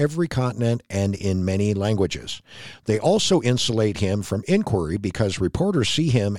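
No technical faults can be heard anywhere in this speech recording: the signal stays continuous throughout, with nothing interrupting or altering it.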